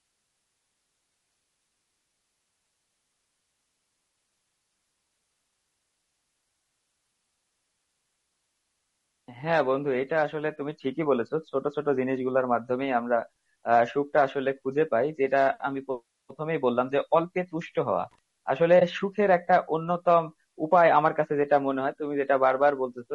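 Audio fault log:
throughout, low-delay AAC compression: rough, grainy sound with noise between harmonics and a thin, synthetic top band; spectrogram shows smeared harmonics, likely AAC-ELD at a low bitrate near 32 kbps.
18.11–18.19 s, loose connector crackle: an intermittent contact chops the signal into an irregular scratchy burst; the waveform shows jagged spikes and dropouts, and the spectrogram shows broadband vertical streaks.
18.79–18.82 s, AAC frame loss with muting: a brief dip, consistent with one lost frame of about 20 ms zeroed by the decoder and faded by overlapping windows; it appears as a brief blank column on the spectrogram.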